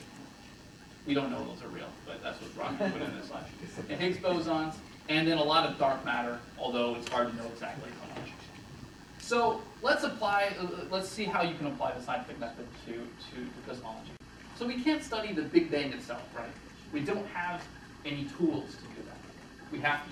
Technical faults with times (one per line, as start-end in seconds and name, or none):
0.00-11.33 DECT cordless phone buzz